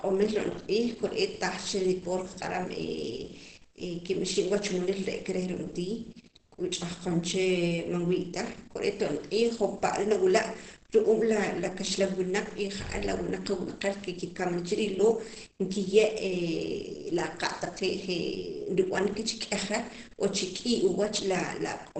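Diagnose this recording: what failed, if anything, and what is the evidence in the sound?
The codec stage failed: a low-rate encode, likely Opus compression running in its speech (SILK) mode at wideband, has damaged the whole recording. The evidence is audible from start to finish. Nothing reaches above about 8.7 kHz, so the speech sounds muffled, and the voiced sounds carry a hoarse quality. That fits a bitrate around 16 kbps, where the encoder gives up full bandwidth and models the voice with a narrower, speech-oriented coder.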